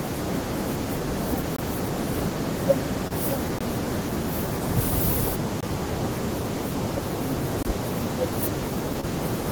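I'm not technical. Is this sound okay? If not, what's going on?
No. There is a gap between chunks: short hard-edged silences of about 21 ms at 1.56, 3.59, 5.61 and 7.63 s, recurring every 2 seconds where the audio pieces join. There are also two spots of short concealed packet loss, at 3.08 to 3.12 s and 9.01 to 9.05 s, where missing audio was patched in, heard as a brief smear.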